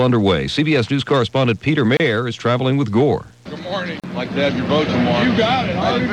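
At 1.97 and 4.00 s, gaps at joins of encoded pieces (about 30 and 38 ms, every 2 s) leave untrimmed encoder padding: brief dropouts, seen as narrow blank columns with smeared edges.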